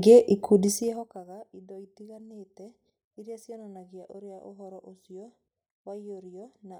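Zipper noise runs from 0.6 to 1.24 s as the speech level drops about 25 dB in unsmoothed 2 dB steps, roughly thirty per second, each stepping as a tick.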